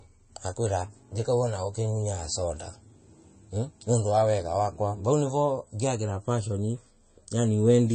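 Throughout the speech, likely MP3 compression at a low bitrate: nothing above 8.3 kHz, a hard ceiling on the spectrogram, with watery, swirly artefacts from weak frequency lines flickering between frames.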